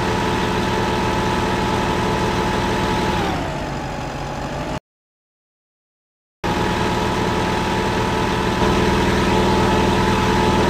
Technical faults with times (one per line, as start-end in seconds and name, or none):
4.78-6.44 playback stall
8.61-10.69 doubled audio track